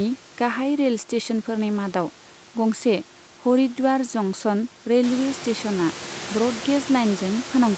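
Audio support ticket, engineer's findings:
No faults found in this speech.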